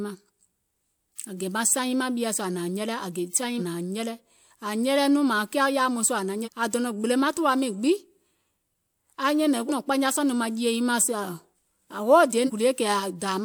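Speech with compressed frames skipped at 6.44, 9.68 and 12.46 s: roughly half a second of audio vanishes at 6.44 and 12.46 s, and about 0.7 s at 9.68 s.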